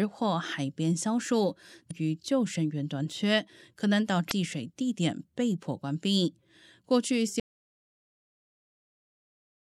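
A speech recording with two brief glitches, at 1.87 to 1.91 s and again at 4.27 to 4.32 s, each lasting about 40 ms. These come from damaged data in a compressed stream: corrupted bytes make the decoder misread frames and lose sync until it locks onto the next valid frame header. From 7.4 s the sound cuts out abruptly into silence with no room tone, and stays silent to the end. This is an audio dropout to silence, likely caused by the input signal being lost while the recorder kept writing silence.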